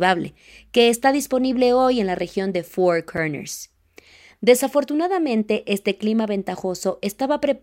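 At 3.17 s there's a block of digital silence, roughly 5 ms of samples zeroed with hard edges, so it comes across as a quick tick.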